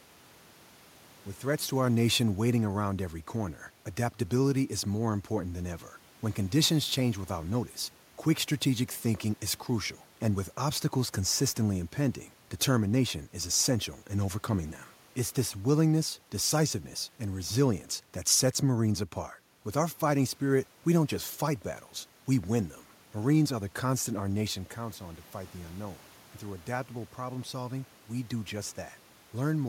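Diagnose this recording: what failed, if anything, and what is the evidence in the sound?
Automatic gain falling, in the call processing: from 1.72 to 6.85 s the AGC reacts to an input too loud or too noisy for its starting gain and eases down about 3 dB, room noise sinking with it, before "change without notice quick".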